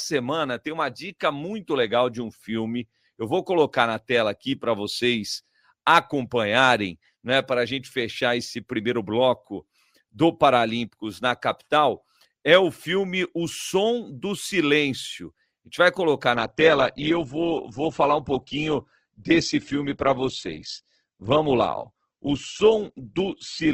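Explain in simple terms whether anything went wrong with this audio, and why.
At 16.36 s, right after "gente vai colocar", the speech suddenly loses its crisp top end until the end. This is an adaptive stream at a lower bitrate: the connection slowed, so a cheaper version played, with nothing above 8.2 kHz.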